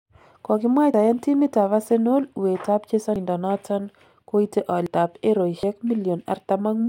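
At 0.94 s (just before "timit ab"), 3.16 s (just after "uet ab"), 4.86 s and 5.63 s, the speech jumps ahead. These are dropped buffers (overrun), likely from audio being overwritten before it was read, each skipping roughly a tenth of a second, a little more at 4.86 s. The waveform shows abrupt splices with no silence, and the spectrogram shows thin vertical broadband lines.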